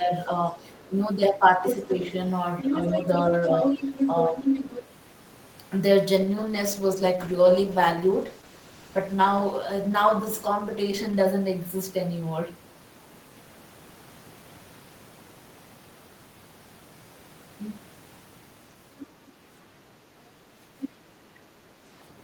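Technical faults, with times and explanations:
0.00–1.89 s, speech suppressed in double talk: The talker's speech dips by about 5 dB in short stretches, about half a second in all. Both sides likely spoke at once. The echo canceller could not separate them, so it pulled down the near voice too.
0.71–0.87 s, 1.70–2.12 s, 2.62–4.89 s, 18.98–19.29 s and 20.81–20.89 s, other side's voice leaking through: A second voice sits under the talker. It is faint at first, about 35 dB down. From about 1.7 to 4.9 s it is nearly equal in level, then quieter again, about 10 to 20 dB down. It likely plays from the talker's loudspeaker and slips past incomplete echo cancellation.
6.17–11.33 s, call bitrate drop: The encoder rate falls from 32 to 13 kbps and stays at the low rate for about 5.1 s. The coding turns coarse, and the top end is trimmed. The speech sounds rougher and duller until the bitrate climbs back.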